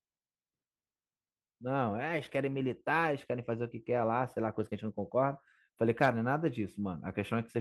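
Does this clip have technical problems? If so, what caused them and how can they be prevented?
No, nothing in this speech recording stood out as a technical problem on listening.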